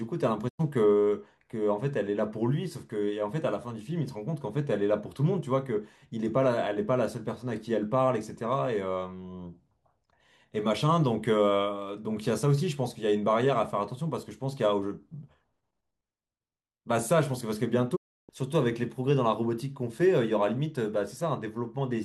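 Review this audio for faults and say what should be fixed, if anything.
Two digital broadcast dropouts break the speech. The first runs from 0.48 to 0.61 s. The second runs from 17.95 to 18.31 s. In each, the sound fades out over about 20 ms and goes silent. The receiver has muted after losing good frames. The holes last about 96 ms and 320 ms, which fits roughly three and ten lost frames. What was said in those gaps is gone. A stronger signal or better error protection on the link would prevent this.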